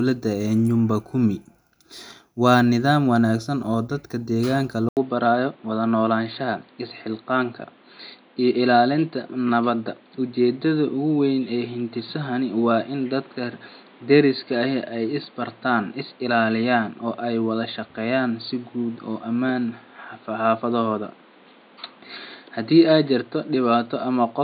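Speech that, after "wanaagsan oo dadka deegaanka" at 4.89 s, drops out for 80 ms and returns dull, with nothing above 4.6 kHz and a new noise floor roughly 30 dB down at unchanged level, persisting to the end: likely an input switched to a poorer device.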